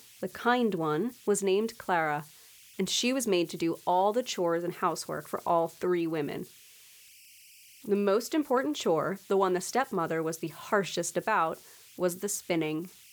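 Throughout the speech, converter idle tones sit about 27 dB below the signal: a whistle near 3 kHz in the pauses and grainy noise under quiet passages. Unlike steady mains hum, an undithered delta-sigma converter's repeating bit patterns make a pitch that shifts with the input's offset.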